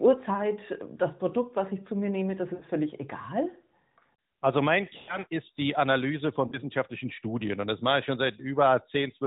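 Lost AMR speech frames occur at 2.54–2.64 s, 4.98–5.19 s and 6.48–6.58 s. The decoder repeats the last good pitch and vocal tract settings with falling gain, so the speech smears and fades. A spectrogram shows smeared harmonics under the 4 kHz narrowband ceiling, and the waveform shows a decaying envelope.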